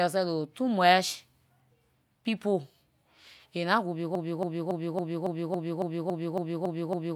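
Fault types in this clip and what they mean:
Broken-record loop: after "aay nah good" at 4.15 s, a 278 ms fragment of speech repeats exactly, back to back, eleven times until the clip ends, the missing speech lost. Likely a stalled player or stream resending its last buffer. Spectrogram and waveform show identical blocks tiling at 0.28 s intervals.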